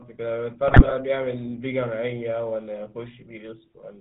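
From the start the speech runs through the GSM full-rate codec, and at this 13 kbps it's plainly audible: nothing above 4 kHz survives, and because the excitation is rebuilt from sparse, regularly spaced pulses, the voice picks up that familiar buzzy, gravelly roughness the whole way through. Then from 0.68 to 0.96 s you get GSM bit errors, with flipped bits corrupting the decoder's filter, pitch and gain values across a run of frames. The spectrum lurches and the level jumps, so for that stretch the sound breaks into squawks, pops and gargling. The damage is dense enough to suggest an error rate of a few percent.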